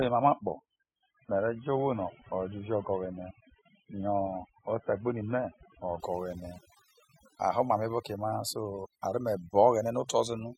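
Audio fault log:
throughout overdone noise removal. Strong noise reduction mutes bands near the noise floor. The background drops and breaks up into twinkling specks.
0.0 to 6.0 s adaptive stream starting at a low bitrate. Nothing is heard above 3.8 kHz, which points to a low-rate AAC start. Quality jumps at 6.0 s without a gap.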